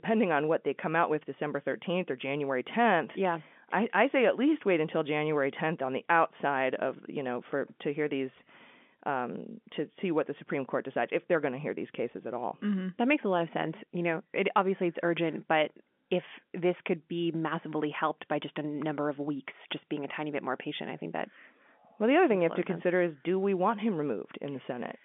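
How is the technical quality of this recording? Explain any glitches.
No glitches or faults can be heard in this recording.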